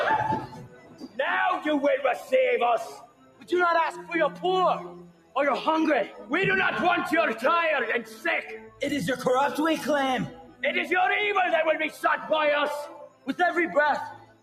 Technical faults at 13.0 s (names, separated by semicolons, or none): noise suppressor applied to music or sounds; sound cut by the noise suppressor